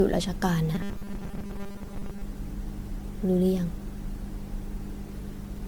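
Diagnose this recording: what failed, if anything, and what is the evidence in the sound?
The whole recording has the smeared, swirly, hollow quality of generation loss at the codec stage, likely from repeated MP3 encoding at around 92 to 93 kbit/s, roughly seven passes. Each re-encode quantises on a shifted frame grid, so noise and spectral holes accumulate and consonant attacks blur. A single encode at that bitrate would sound far cleaner.

From 0.75 to 2.22 s the speech becomes a rigid, metallic buzz at 200 Hz that still roughly tracks the speech. This is robotic sound from repeated short buffers at the driver or buffer stage, likely caused by audio arriving too slowly. The player loops the last fragment, which fits a 5 ms buffer, and skips most of the real audio. Codec warble has no fixed pitch, but this buzz holds one steady tone.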